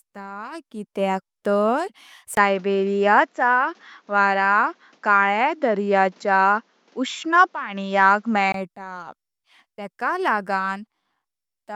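At about 2.35 s the speech suddenly goes duller and a bit boxy, right after a brief gap of around 20 ms, and it stays that way until about 8.54 s, when the full sound comes back. That's an input switched to a poorer device, likely a change to another mic or a headset profile. Everything above 7.6 kHz is gone, the level shifts by a few dB, and a faint new noise floor sits well below the speech.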